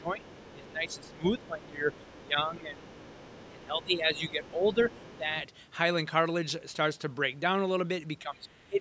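Speech suppressed in double talk affects the speech from 0.0 to 2.9 s, from 3.49 to 5.36 s, and from 8.2 s to the end. The voice dips by up to roughly 15 dB, losing presence and breaking up in places. This is likely because the echo canceller could not tell the near talker apart from loudspeaker echo during overlapping talk, so it attenuated both.

The other side's voice leaks through from 0.21 to 2.28 s, from 2.84 to 5.18 s, and briefly from 8.51 to 8.57 s. It is a faint second voice, around 25 dB below the speech and nearer 35 dB down at the end. This is likely echo that the canceller left in the microphone signal.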